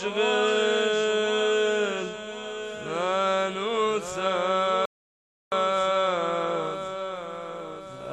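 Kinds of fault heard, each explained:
Rebuffering stall: playback drains its downloaded audio and halts, so the sound drops to silence at 4.86 s and picks up again at 5.52 s exactly where it stopped. Nothing is skipped; the gap simply inserts about 0.67 s of extra time.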